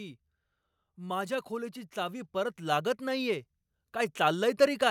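From 0.96 to 3.47 s there's automatic gain rising: the gain control judged the input too quiet and pushed it up about 5 dB, so the speech and background swell together.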